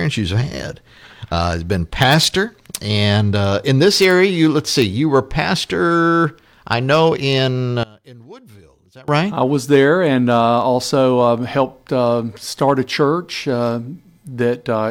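One stereo channel was likely inverted in polarity between 7.83 and 9.08 s, so on mono playback the material common to both channels cancels, dropping the level by about 25 dB and leaving only a faint residue of the sound.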